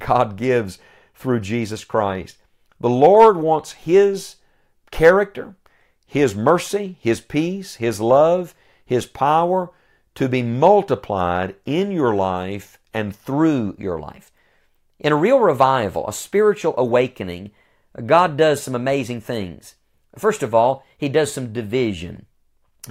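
From 13.11 s, right after "multiplied in your life", the voice suddenly sounds brighter and slightly rushed through to the end at 22.90 s. Everything runs about 1.09 times faster and sits roughly 1.5 semitones higher, with pitch and tempo shifting together. This is a wrong sample rate fault: the samples are being played back faster than they were captured, without resampling. The ratio fits audio recorded at 44.1 kHz being played at 48 kHz.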